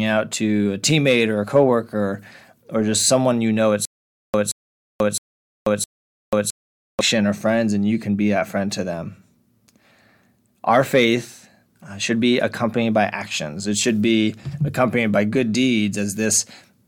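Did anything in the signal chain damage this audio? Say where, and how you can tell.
Yes. There is a stutter with silent gaps from 3.85 to 7.01 s, just after "someone you know at" and before "or friends and you". A 175 ms fragment of speech repeats four times, each followed by about 488 ms of digital silence, on a steady 663 ms cycle. That pattern points to the playback or streaming buffer, which likely stalled and re-sent its last block on each retry before running dry. The speech that belonged in that span never arrives.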